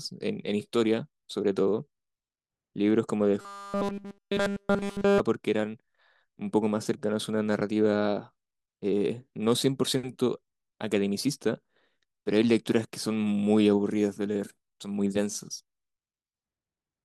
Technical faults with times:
3.41-5.20 robotic sound from repeated short buffers

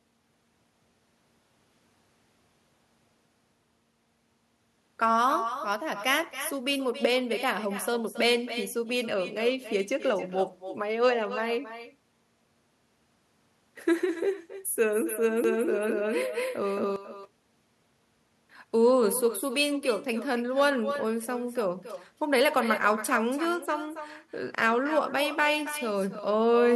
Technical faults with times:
0.00-26.75 echo with no canceller
15.44-16.96 doubled audio track

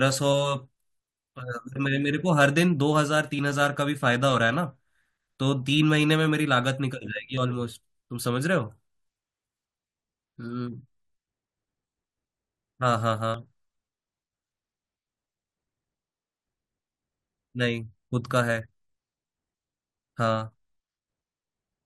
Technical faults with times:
1.39 overlap between stream segments
3.39 overlap between stream segments
7.38 overlap between stream segments
13.34 overlap between stream segments

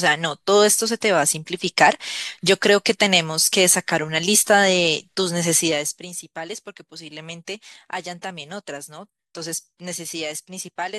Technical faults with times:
5.55-6.06 zipper noise

